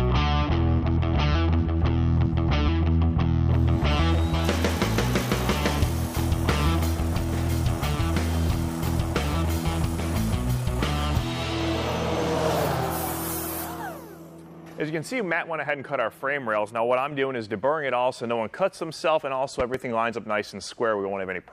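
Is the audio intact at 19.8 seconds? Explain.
No. A loud pop, actually two in quick succession, runs from 19.60 to 19.77 s, about 10 dB above the sound. It is likely a sudden voltage pulse from a plug, switch or static. The sound carries on underneath.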